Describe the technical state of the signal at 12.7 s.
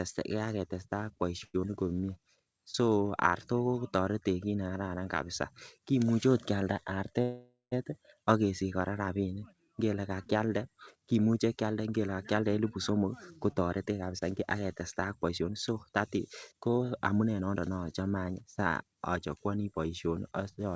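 Speech sounds hurried at unchanged pitch from 12.43 to 17.69 s, after "ka kyalde kimuche kyanden": a jitter buffer speed-up running about 11% fast, trimming pitch-period slices to shed roughly 0.7 s of backlog.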